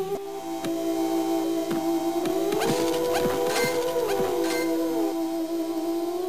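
A doubled audio track runs from 2.3 to 5.12 s: a second full-band copy of the sound trails the original by roughly a second, sitting around 5 dB quieter. It carries no reverberant tail or room colouring, so it reads as a clean, late repeat rather than an echo, and it cuts in and out abruptly at those times. The likely cause is the signal being captured twice, once through a slower path.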